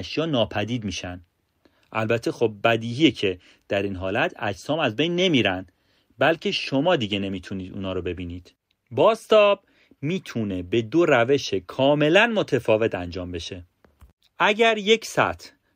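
Call bitrate drop from 6.19 to 10.83 s in this speech clip: the encoder is starved of bits, consistent with a fall from about 64 to 28 kbps, so the sound turns coarse and rough, bottoming out for about 3.6 s.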